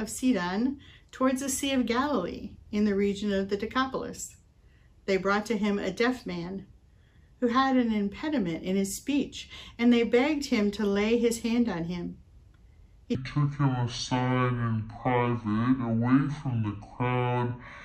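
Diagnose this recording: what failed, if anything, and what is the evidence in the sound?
From 13.15 s to the end, a section at the wrong speed: the audio abruptly runs at about 0.55 times its original rate, and pitch falls with it by roughly ten semitones, so the sound turns deep and sluggish. Because speed and pitch shift together, this is resampling rather than time-stretching. The likely stage is playback or editing, where that segment was clocked at a rate well below the one it was recorded at.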